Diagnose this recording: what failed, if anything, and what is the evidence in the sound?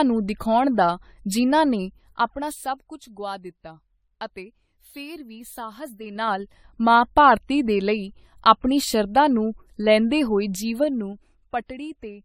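Codec stage: across the whole speech recording the sound is swirly, smeared and hollow, with blurred consonant attacks, more degraded than a single pass at a rate that fits AAC-LC around 96 kbit/s would leave. Content still reaches 20 kHz, so bandwidth is not the problem. The likely cause is generation loss from roughly ten decode and re-encode cycles. Each pass requantises on a shifted frame grid, so noise and spectral holes accumulate.

Gain or mixing stage: from 1.79 s to 2.99 s, between "ਨੂੰ ਦਿਖਾਉਣ ਦਾ ਜਿਨ੍ਹਾਂ" and "ਗੁਆ ਦਿੱਤਾ ਅਤੇ ਫਿਰ", a ticking zipper noise rides on the sound while the level drops by about 15 dB. The gain moves in 3 dB steps at roughly five per second with no interpolation, and each jump puts a small discontinuity into the waveform that is heard as a click.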